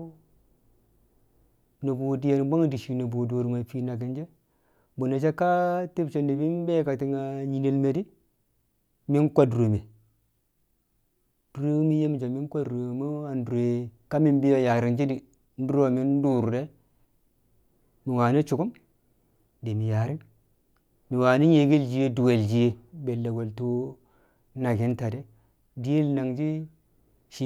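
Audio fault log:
No technical faults turn up anywhere in the speech; the signal holds steady, with no breaks or disturbances of its own.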